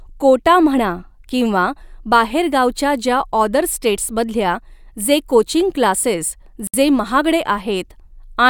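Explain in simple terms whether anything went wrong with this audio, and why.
At 6.67 s, after "स्टेटसमधल्या जे कोचिंग क्लासेस", the speech drops out for about 64 ms. This is a gap at a join of encoded pieces: two separately encoded parts were butted together untrimmed.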